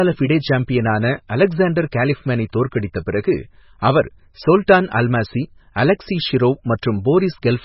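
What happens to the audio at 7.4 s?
At 7.4 s the speech carries the MP3 compression heard throughout. Nothing sounds above about 5.6 kHz, and weak frequency detail flickers on and off between frames, giving a watery, swirly texture with smeared attacks. The heavy damage likely reflects a bitrate around 16 kbps.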